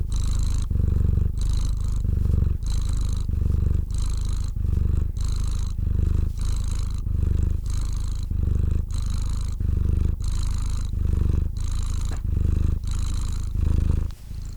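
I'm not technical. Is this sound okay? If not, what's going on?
Yes, nothing stood out as a problem when listening to this recording.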